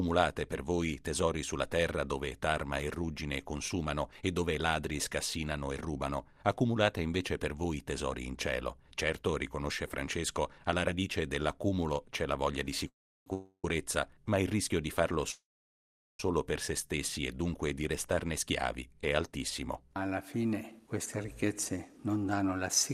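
At 12.88 to 13.27 s, 13.33 to 13.65 s and 15.32 to 16.20 s there are call audio freezes: the sound stalls into a brief fading buzz, then silence (about 0.34 s, 0.06 s and 0.76 s), and resumes where it stopped with nothing missing. This is likely late packets draining the jitter buffer. On a spectrogram, smeared horizontal streaks decay into blank columns. From 20.21 to 22.93 s, a jitter buffer speed-up trims short pitch-period pieces to run about 10% fast at unchanged pitch, removing about a third of a second. The waveform shows whole cycles cut out, and the spectrogram shows harmonics still level.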